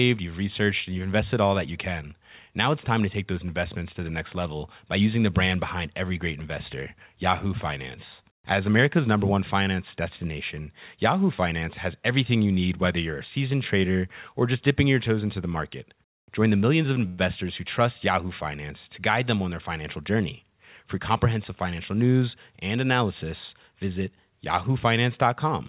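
A speech clip carried over a narrowband call line, with nothing above 4 kHz, which fits G.711 mu-law at 64 kbps. At 17.07 s the sound stalls until 17.20 s. The last sound is stretched into a brief fading buzz for about 111 ms. Speech then resumes where it stopped, with nothing lost. This is a call audio freeze, likely from packets arriving late and the jitter buffer running dry.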